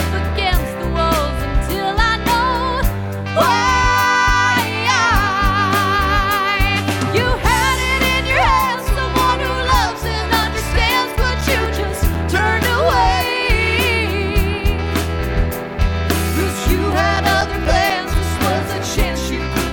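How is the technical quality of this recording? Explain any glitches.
Two bursts of CD scratch ticks mar the recording. They run from 10.43 to 13.36 s and from 15.94 to 19.12 s, at about four ticks a second. A blemish defeats error correction once per disc turn. The player patches the lost samples, leaving brief clicks of a few milliseconds and of uneven strength.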